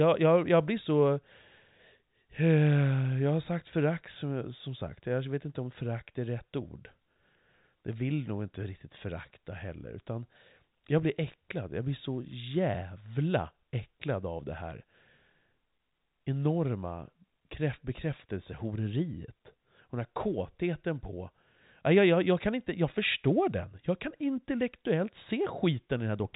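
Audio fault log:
No faults heard anywhere in this speech recording.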